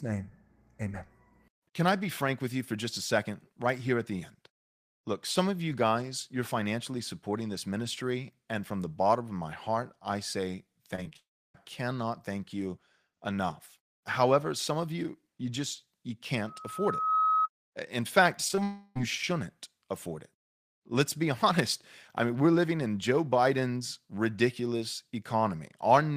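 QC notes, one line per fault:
10.95–11.17 s, repeated packet loss (robotic sound): Right after "my heart I say", packets went missing four times in about a fifth of a second, each gap no longer than 21 ms and about 80 ms lost in all. The receiver bridged each hole by extending the last bit of speech. Because a third of this stretch is patched audio, the speech turns choppy, with small pieces cut out.
11.17–11.56 s, long network dropout: About 0.38 s of speech never arrives, most likely because the network stream stalled. At first the receiver keeps the previous sound going as a fading buzz or hiss. That gives way to roughly 0.31 s of silence. Speech comes back at "cannot thank you enough", with the missing part simply gone.
16.44–17.49 s, loudspeaker feedback squeal: A microphone is picking up the loudspeaker it feeds, and at 1.3 kHz the loop gain goes above unity. That one frequency keeps reinforcing itself. 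Over roughly 0.7 s it builds into a steady tone that ends up about 5 dB louder than the speech. It is heard as a single tone rising into a squeal for about a second.
18.48, 18.51 and 18.55 s, short concealed packet loss: Three 20 ms packets in a row miss the decoder's deadline. Each hole is filled from the sound just before it, then faded back into the real signal. Because the three gaps come back to back, the result is a quick wobbly smear lasting about a tenth of a second, and any short consonant in it can drop out.
18.63–18.97 s, long network dropout: About 0.32 s of audio is lost, most likely from a network interruption, shortly after the three brief losses. Here the receiver fills the entire gap by continuing the last sound, so there is no silence, just a stretched sustain. Speech returns at "shouldn't afford it" without the lost portion.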